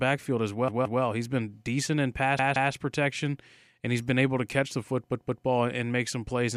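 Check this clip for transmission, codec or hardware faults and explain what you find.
Three repeated-buffer faults occur in the speech, at 0.68 to 1.02 s, 2.39 to 2.73 s (after "been decent in pass", before "protection and he's been") and 5.12 to 5.46 s (after "able to catch the", before "and make some plays"). Each time, new audio arrived late and the last block was replayed twice more, so a 0.17 s fragment, which fits an 8192-sample buffer, sounds three times with hard joins: a distinct stutter, with essentially nothing dropped afterward.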